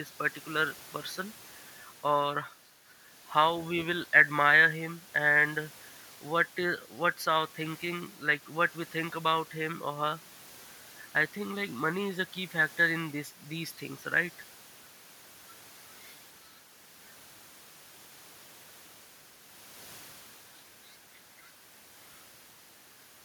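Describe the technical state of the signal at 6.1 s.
At 6.1 s the speech signal is intact, with no audible fault at that point.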